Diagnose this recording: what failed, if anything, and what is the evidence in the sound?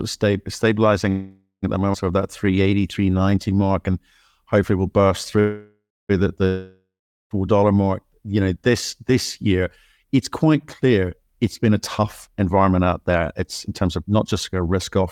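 Call audio freeze, at 1.09–1.65 s and again at 5.40–6.11 s. This is a network fault, likely a packet delay that let the jitter buffer run dry. In each case the receiver stretched the last sound into a decaying buzz, about 0.53 s and then about 0.70 s. That fill fades into near-silence, about 100 ms the first time and 250 ms the second. The first resumes on "at the". Nothing is lost; the gap simply pushes later audio back.

Skip ahead, at 1.93–1.96 s. This is a network or jitter buffer fault. Later packets were already queued, so the receiver discarded roughly 0.2 s of audio to get back on schedule. The join carries only about 13 ms of fill. The sound jumps abruptly forward, and the material on either side butts together with a missing chunk between them. Overall latency drops by roughly that same 0.2 s.

Jitter buffer slow-down, from 2.18 s to 3.92 s, between "sort of" and "and hopefully we will". 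This happens at the jitter buffer stage. The buffer was short of reserve, so the receiver repeated individual pitch periods many times in succession, inserting 216 ms in total. The speech plays at 88% of normal speed with its pitch unchanged. Sounds drag out across the stretch as the buffer rebuilds its cushion.

Long network dropout, from 6.47 s to 7.32 s. This is a network outage, likely a run of packets that never arrived. The receiver extended the last sound as a fading buzz for about 0.83 s. About 0.41 s of that is near-silence once the fill has died away. Audio resumes at "dollar mark you know", but roughly 0.84 s of the original was never played, so the speech picks up further along than where it broke off.

Jitter buffer speed-up, from 11.27 s to 15.04 s, just before the end. This also happens at the jitter buffer. The buffer was holding more audio than its target. To shed that excess, the receiver trimmed short slices of one or a few pitch periods, over and over, removing roughly 0.3 s. 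The speech runs at 108% speed with pitch preserved, so the close of the clip sounds slightly hurried.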